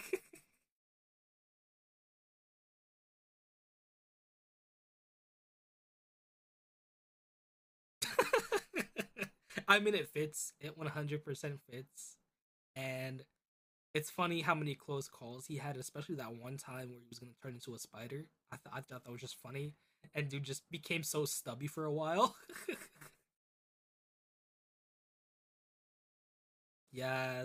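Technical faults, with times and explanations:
No technical faults can be heard in this speech.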